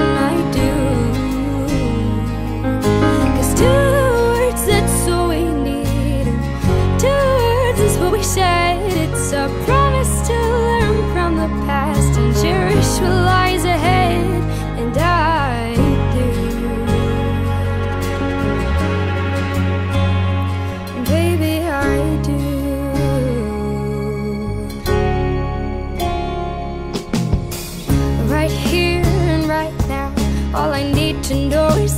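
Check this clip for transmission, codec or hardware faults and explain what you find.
One fault stands out, GSM signalling bursts from 17.70 to 18.41 s. A galloping dit-dit-dit of short buzzes at about 217 Hz cuts in, sitting about 20 dB below the main sound. A nearby 2G phone sending brief signalling bursts induces these in the audio circuitry, which rectifies the radio pulses into audible buzz.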